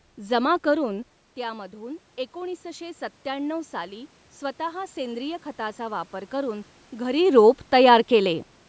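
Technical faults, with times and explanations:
1.36 to 7.20 s, automatic gain rising: Just after "जमा करून" the talker moves back and the input falls by about 11 dB. The gain control responds slowly, adding about 7 dB over several seconds. Speech and room noise swell up together.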